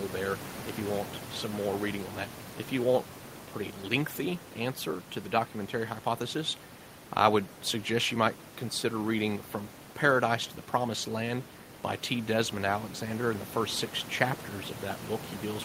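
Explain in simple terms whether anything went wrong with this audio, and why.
Nothing went wrong; the background noise is normal.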